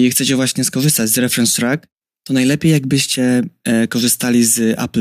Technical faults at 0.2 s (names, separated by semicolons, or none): none